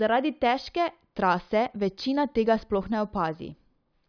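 No technical faults are audible anywhere in the speech.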